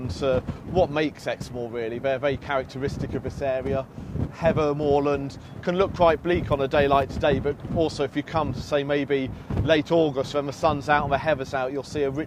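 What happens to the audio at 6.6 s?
Nothing goes wrong at 6.6 s; the audio runs through that moment intact, with no break, click, dropout or other fault.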